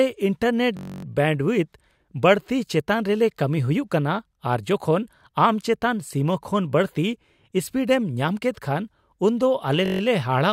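At 0.77 s the speech locks into a system hang loop until 1.05 s, and again from 9.86 to 10.01 s. The driver stalled while the hardware kept replaying one 21.33 ms slice, 13 times and then 7 times, which fits a 1024-sample buffer. Repeating that fast turns the slice into a steady buzz near 46.9 Hz. Unlike mains hum or a dropout, the buzz carries the tone of the frozen audio and then cuts cleanly back to speech.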